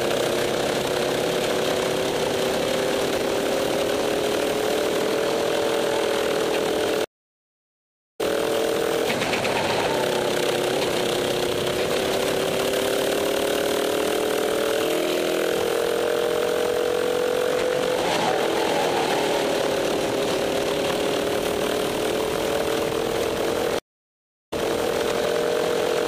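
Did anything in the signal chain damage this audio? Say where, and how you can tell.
Yes, at the network stage: two stream reconnects. At 7.04–8.21 s the sound stops for 1.15 s and resumes roughly 0.7 s further on. At 23.79–25.01 s a 0.73 s gap ends with audio repeating from 0.50 s earlier. Each time the connection dropped and a fresh decoder restarted mid-stream at a shifted position.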